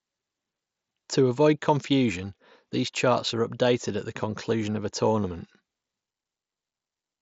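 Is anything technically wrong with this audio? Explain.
No, nothing is technically wrong with this audio.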